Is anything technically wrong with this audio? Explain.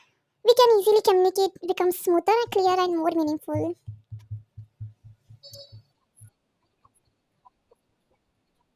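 Yes. There is a wrong sample rate fault from start to finish. The samples are played faster than they were captured, with no conversion, so time and pitch shift together. The speech runs about 1.45 times too fast and sits about 6.45 semitones too high, a ratio that fits audio recorded at 22 kHz being played at 32 kHz. Voices come across as hurried and chipmunk-like, with every syllable compressed and raised by the same amount.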